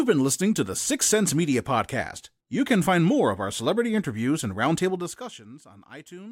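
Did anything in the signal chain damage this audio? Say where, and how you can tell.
Yes. Zipper noise damages the speech from 4.86 to 5.44 s. The fault sits in a gain stage that updates once per buffer, at the driver or buffer level. During that stretch the level falls by about 20 dB. You can hear a ticking, zipping texture riding on the speech while the level moves. The gain drops in 1 dB steps, around 50 per second, with no smoothing between them. Each abrupt step leaves a small click, and the run of clicks makes the zipping sound.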